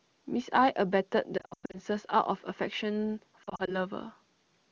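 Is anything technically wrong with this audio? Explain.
Yes. There are lost AMR speech frames in two places: 1.37 to 1.80 s and 3.43 to 3.77 s. Radio errors corrupted frames, so the decoder discarded them. It filled each gap by repeating the last good pitch and spectral shape at falling level. In the first patch, about 260 ms of gaps are spread over 360 ms, with runs up to 100 ms that smear and fade. The second is milder: short warbles, 40 ms at most, spread over 240 ms. The wideband HD Voice sound is clear around these gaps.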